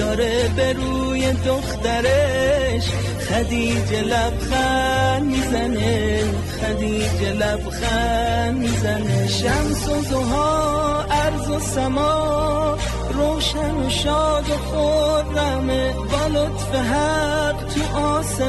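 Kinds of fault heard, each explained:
Hard clipping: throughout the clip, the signal is pushed about 4 dB past what the converter or number format can carry, so the highest peaks are sliced off flat instead of rounding over. Only a small fraction of samples, under one percent, hit that ceiling, so the damage is confined to the loudest moments. There the squared-off tops throw extra harmonics high into the spectrum, heard as brief crackle and grit riding on each peak.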